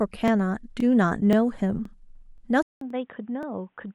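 Overlapping chunks cause a short stutter at 0.28, 0.80, 1.33, 1.85, 2.38, 2.90 and 3.43 s. Each block of about 0.5 s begins before the previous one ends, so 25 ms of speech plays twice at every join, giving a regular click.

At 2.63 s the sound drops out for 187 ms and returns dull and boxy, with nothing above 3.8 kHz, a level about 10 dB lower, and a new noise floor roughly 45 dB down. This was likely an input switched to a poorer device.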